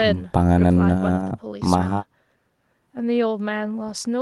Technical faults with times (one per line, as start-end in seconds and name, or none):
none